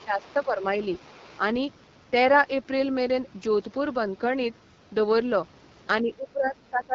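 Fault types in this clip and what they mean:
AMR wideband (HD Voice) codec: Throughout, at 8.85 kbit/s, a raspy, rough texture with nothing above 7.5 kHz, unlike narrowband telephone audio, which stops near 3.4 kHz.
Speech suppressed in double talk: The speech sinks about 10 dB at the start and about 15 dB from 6.02 s to the end. These are likely echo-canceller dips, not clean dropouts to silence.
Other side's voice leaking through: A faint second voice, about 25 to 35 dB below the main speech, comes in scraps between 0.21 and 1.38 s. It is likely uncancelled echo, not steady background noise.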